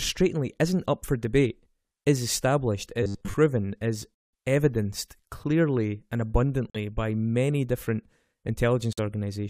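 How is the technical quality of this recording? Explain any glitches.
The recording has two kinds of fault: a short stretch of robotic sound and three dropouts from muted corrupt frames.

From 3.03 to 3.34 s, right after "for debate is established", the speech turns into a rigid, metallic buzz at 100 Hz that only loosely follows the words. This is robotic sound from repeated short buffers, likely caused by new audio arriving too slowly. The playback loops a 10 ms slice to fill the gaps. Most of the real audio in that span is skipped, and the repetition rate becomes the buzz pitch.

Corrupt frame muted occurs at 4.15 to 4.33 s, just before "evidenced clearly and"; at 6.70 to 6.76 s, between "is evidenced clearly and" and "by many different"; and at 8.93 to 8.99 s. Each time, damaged compressed frames were rejected by the decoder and replaced with silence. The sound cuts abruptly to nothing, for about 190 ms in the first case and about 60 ms in the other two, then resumes on time with no drift.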